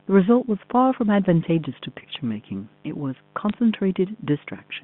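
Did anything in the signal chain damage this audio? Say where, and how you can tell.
Yes. Mains buzz at 50 Hz runs through the whole recording, sitting around 30 dB below the speech. It enters in the analogue wiring, where switching spikes from a dimmer, rectifier or unshielded cable repeat 100 times a second, spreading harmonics high into the band as a raspy buzz.

Bit errors on a digital phone line appear from 3.49 to 3.54 s as a short burst of sharp ticks over the speech. On the network leg, a small fraction of G.711 bits, roughly a fifth of a percent, flipped, each corrupting single samples inside the 150 Hz to 3.5 kHz telephone band.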